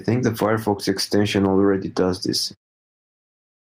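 Across the whole recording the level pumps, swinging by around 10 dB. The dynamics sound squashed. This gain pumping is likely from gain set far too high, with a fast limiter clamping down on peaks. The fade-out from about 2.5 s to 2.56 s is smooth.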